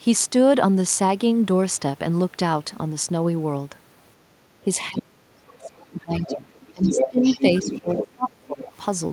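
A speech recording in which the echo canceller, during moments of double talk, likely failed to tell the talker apart from loudspeaker echo and pulled down everything it heard, causing speech suppressed in double talk. The talker's voice sinks by roughly 30 dB at worst from 4.89 to 6.54 s, with about a second and a half of it turned down, and by around 20 dB from 6.72 to 7.25 s and again from 7.61 to 8.7 s. There the voice dips. The same canceller also likely left residual loudspeaker signal in the microphone path, so the other side's voice is leaking through in scraps. It appears from 5.64 to 5.81 s at roughly 20 dB under the talker, from 6.29 to 6.36 s at about 10 dB under, from 6.55 to 6.66 s as a faint trace some 35 dB down, and from 8.0 to 8.07 s at about 10 dB under. The longest stretch runs from 6.83 to 7.75 s, where the second voice is about as loud as the talker.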